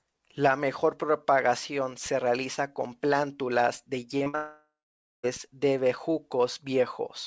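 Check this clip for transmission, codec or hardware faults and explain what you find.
The speech carries a cluster of network faults starting at 4.18 s, all heard through a call path whose band stops at 8 kHz, consistent with G.722 wideband coding.

Short concealed packet loss occurs twice, at 4.18 to 4.22 s and 4.24 to 4.28 s, each a 20 ms hole. The decoder missed one packet's worth of audio and extrapolated the preceding sound to bridge it, then crossfaded back to received audio. Each shows up as a brief smear or wobble, and the two sit close enough to roughen the speech just before the larger failure.

A burst of packet loss follows directly at 4.28 to 4.35 s, about 60 ms missing. Several consecutive packets failed to arrive in time, so the receiver kept synthesising from the last good frame while attenuating it. The result is a short held buzz or fading hiss in place of real speech, after which the signal does not recover but runs straight into the next fault.

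A long network dropout runs from 4.35 to 5.25 s, roughly 880 ms of lost audio, likely caused by a complete interruption of packet delivery. Concealment stretches the last sound into a decaying tone or hiss, then gives up, leaving about half a second of silence. Speech resumes at 5.25 s with the intervening material simply absent, so the utterance jumps forward.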